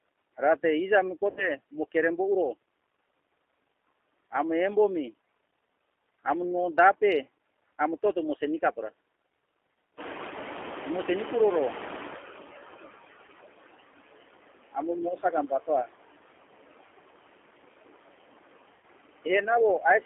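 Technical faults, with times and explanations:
Throughout: noise suppressor artifacts. The background is pulled down by about 20 dB, sinking in the gaps and rising under the talker, from the frame-by-frame band cutting.
Throughout: G.729 codec. The line band stops at 300 Hz and 3.4 kHz, so there's no real low end or top. The rough, slightly synthetic speech texture fits G.729A at 8 kbit/s, which rebuilds the voice from a filter, pitch predictor and a few pulses per frame.
1.30–1.51 s, 13.27–13.29 s, 18.74–18.85 s: VoIP packet loss concealed by the speech codec. About 70 ms, 10 ms and 90 ms of audio go missing. The decoder stretches its last pitch and filter into a fading buzzy tone or coloured noise, and the voice stays a bit weak and smeared just after each gap.
9.97–12.89 s: noise suppressor catching up. The room noise jumps by about 17 dB around 10 s and sits roughly 10 dB below the speech. 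The suppressor's noise estimate lags behind, so the noise comes through with less reduction at first and then sinks over about 2.9 s toward roughly 16 dB of reduction.
15.23–15.9 s: speech cut by the noise suppressor. The suppressor mistakes parts of the speech for background and turns them down by up to about 16 dB, around a fifth of a second in total. Those bits sound swallowed and faint.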